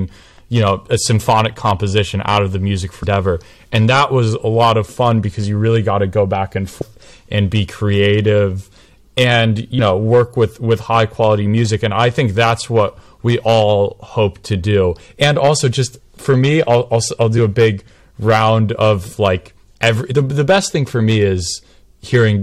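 A speech recording with a harsh, crackly edge on its loudest syllables all the way through. This is hard clipping: the level is pushed about 7 dB past what a stage can pass, so around one percent of samples have their peaks sheared flat, adding high harmonics. Short glitches break in at 3.02–3.04 s, 6.81–6.83 s, 9.78 s and 20.11–20.13 s. These come from damaged data in a compressed stream, where the decoder misreads corrupted frames, loses sync and jumps ahead to the next frame header.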